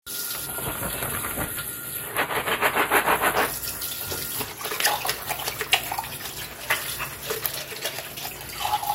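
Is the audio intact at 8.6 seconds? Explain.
No. DAB burbling runs from 8.24 to 8.62 s, so 8.6 s falls inside it. Weak reception is letting bit errors slip past the error correction into the MP2 data, at a rate of roughly 0.2 percent. Corrupted samples put short blips of noise into single sub-bands, and corrupted scale factors make sub-bands jump in level for up to a frame, across what sounds like a run of many frames. The result is a burbling texture laid over the sound.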